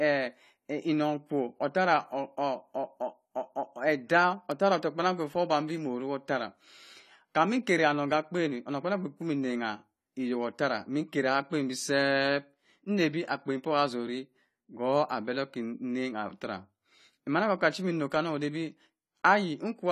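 From start to finish the speech carries plainly audible codec damage, likely from AAC compression (AAC-LC) at a low rate that fits roughly 32 kbps. With too few bits per frame, the encoder coarsely quantises the spectrum and discards everything above 14.1 kHz, so the sound comes across dulled and smeared with a grainy, processed edge. On a spectrogram the energy stops at a flat, hard ceiling near 14.1 kHz for the whole clip.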